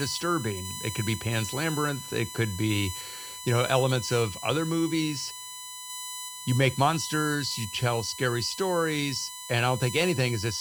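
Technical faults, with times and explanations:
Throughout: USB whine, a steady high-pitched tone locked to 1 kHz with its harmonic series running above it, the 4 kHz component standing out most and sitting only around 10 dB below the speech. The 1 kHz spacing points to the bus's 1 ms frame rate, with current pulses on the power or ground line coupling into the audio path. Mains hum, by contrast, would sit far lower, at 50 or 60 Hz and its multiples.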